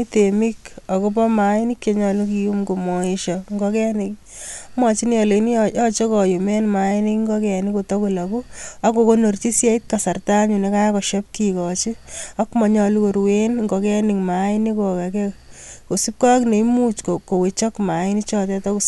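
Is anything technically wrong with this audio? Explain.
No, nothing technically wrong is audible anywhere in this speech recording.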